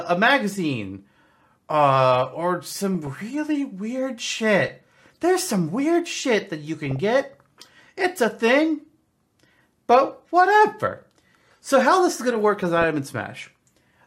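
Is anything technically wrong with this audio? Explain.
Yes. DAB burbling occurs at 4.62 to 4.70 s, after "really weird", and at 6.86 to 6.99 s, after "weird shit that you". Bit errors at a low rate slip past error correction, so a handful of frames carry corrupted sub-band samples, producing brief blips of noise over the speech.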